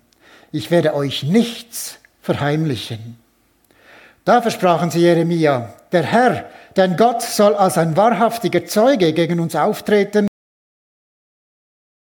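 At 10.28 s a cut-off end: the final buffers never played, so the sound stops mid-event into digital silence, with no decay tail, unlike a fade-out.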